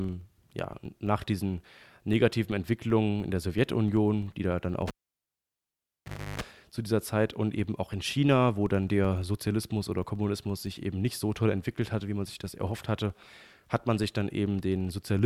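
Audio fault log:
throughout: filter restarted on every block. A faint tick lands at the start of each processing block, and the ticks repeat at about 23.4 Hz, which fits a 2048-sample block. The filter begins each block from zero instead of carrying its previous state forward, so each boundary gets a small transient. Unlike steady mains hum, this buzz rises and falls with the speech level and nearly vanishes in pauses, because the transients scale with the signal.
4.87 to 6.41 s: cable pulled and plugged in. A pop marks the moment the connection breaks. The speech then drops to near silence for about 1.49 s. During the gap, a 50 Hz mains buzz lasts about 0.33 s while only the plug tip makes contact and picks up interference. A second pop follows as the full connection returns. Unlike a digital dropout, this gap is bracketed by pops and contains the mains burst.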